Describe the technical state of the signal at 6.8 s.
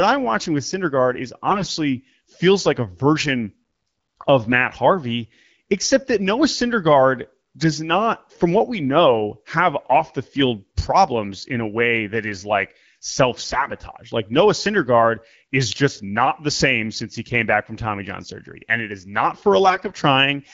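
At 6.8 s the speech is intact, with no fault present, and the only trace of its AMR wideband (HD Voice) coding is the band-limited top end typical of that codec.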